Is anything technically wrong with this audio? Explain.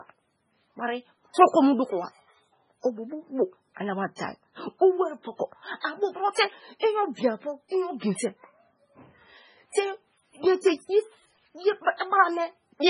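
Yes, there are two faults.

Throughout, the speech sounds watery and swirly, with nothing above 10.5 kHz, the heavy damage likely from MP3 compression at a very low bitrate, around 16 kbps.

From 5.81 to 5.84 s, just after "eri poko", a brief hiss smears in before an attack: pre-echo, where block-wide quantisation noise spreads about 35 ms ahead.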